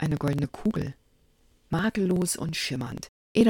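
Periodic USB or driver dropouts run through the audio from 0.06 s to 3.41 s. Every 0.054 s, roughly eighteen times a second, a short piece of around ten milliseconds goes missing, and about seventy gaps occur in all. The missing audio is skipped rather than filled with silence, so each cut joins two non-adjacent points in the waveform and produces a regular tick. The steady spacing suggests a background task stalling the USB bus or audio driver on a fixed cycle.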